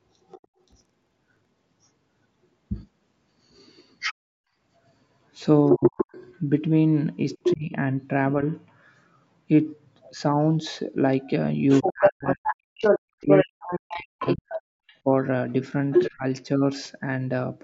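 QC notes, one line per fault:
0.29–0.47 s and 4.0–16.1 s, other side's voice leaking through: The echo canceller likely failed to remove the far end's loudspeaker output from the microphone. A second voice is heard, roughly 25 dB under the talker at first, then for twelve seconds at about equal level.
0.60–1.52 s, buffer tearing: The writing program and the hardware reading the ring buffer have drifted and cross inside each period, so a small slice of each buffer, roughly 100 ms old, is replayed between hard joins. This gives a 23.4 Hz rattle, which fits a 2048-sample buffer.
5.77–8.42 s and 11.82–16.26 s, speech suppressed in double talk: With both sides talking, the echo canceller likely could not separate the talker from the loudspeaker echo and turned both down. The talker dips by up to about 35 dB for roughly a third of a second in the first span, then by up to about 40 dB across about one and a half seconds in the second.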